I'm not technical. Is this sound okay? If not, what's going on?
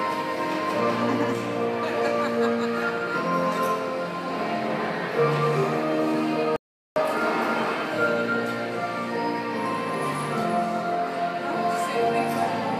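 No. Audio dropout to silence from 6.56 to 6.96 s: the input was likely lost briefly, so 0.4 s of sound became dead, empty silence.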